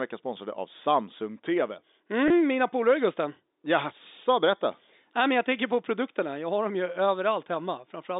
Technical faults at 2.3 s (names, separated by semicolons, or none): packet loss with pitch repetition